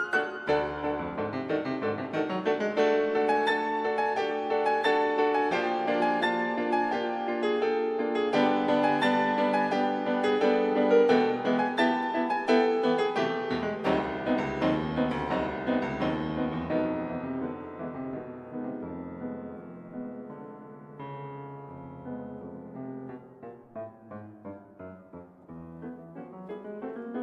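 No technical faults can be heard anywhere in the audio.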